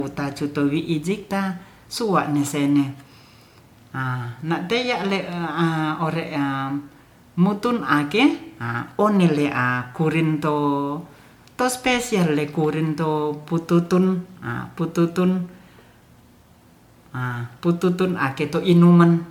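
Generation loss runs throughout the speech, a swirly, smeared and hollow quality with blurred attacks, heavier than one encode would leave though content reaches 20 kHz. It is likely from MP3 re-encoded a few times, each pass adding quantisation noise, consistent with 96 kbit/s.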